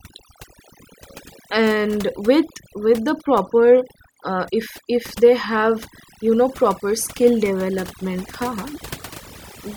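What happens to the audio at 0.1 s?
At 0.1 s the speech is already under overdone noise removal, which runs through the whole clip. Bands near the estimated noise floor are cut almost to nothing, leaving a lowered background broken into twinkling specks. A spectrogram shows scattered isolated bright dots in dark gaps.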